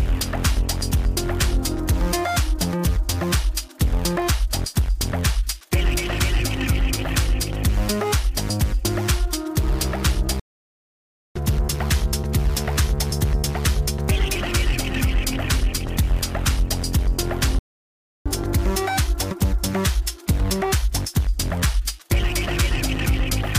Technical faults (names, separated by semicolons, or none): playback stall; catch-up at higher speed